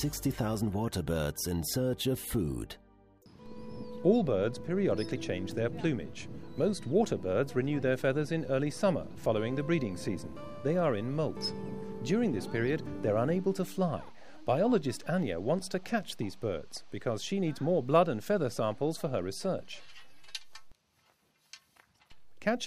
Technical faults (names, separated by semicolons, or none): none